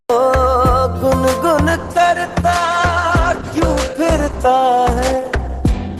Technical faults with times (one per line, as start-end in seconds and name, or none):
1.69-5.99 adaptive stream at a lower bitrate